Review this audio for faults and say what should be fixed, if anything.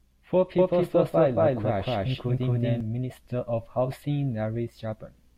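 From 0.59 s to 2.81 s the speech carries a doubled audio track: a second, full-band copy trails the original by about 200 ms at roughly equal level, with no decay or room colour, and it cuts in and out abruptly at those points. The cause is likely the same signal being captured again through a slower monitoring or return path, or two misaligned copies left in an edit. Route each source through a single capture path and check that overlapping regions are removed before export.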